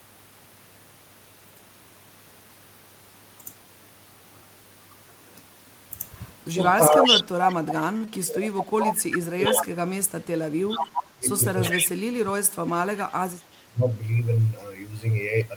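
From 6.46 s to 13.85 s the talker's level repeatedly dips, by about 35 dB at the deepest, across roughly 7 seconds in all. This is speech suppressed in double talk, likely an echo canceller that could not tell near-end speech from loudspeaker echo and attenuated both.

At 6.61 to 7.55 s a delayed copy of the voice arrives 396 ms behind the original at about the same level. This echo leak is likely loudspeaker pickup the far end's canceller failed to remove. Weaker recurrences, about 10 dB down at the same delay, follow at 9.14 to 9.64 s, 10.71 to 11.07 s and 11.64 to 11.81 s.

At 7.97 s a short stall from a late packet holds the current sound for 36 ms with nothing lost, giving a slightly drawn-out moment before playback resumes where it stopped.

At 8.05 s a short concealed packet loss replaces 20 ms of missing audio with an extrapolated continuation, heard as a brief smear before the real signal blends back in.

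From 12.2 to 13.22 s a jitter buffer speed-up plays the speech at 104% of normal rate. About 50 ms of pitch-period fragments are cut to reduce buffered delay, so the talker runs slightly faster at unchanged pitch.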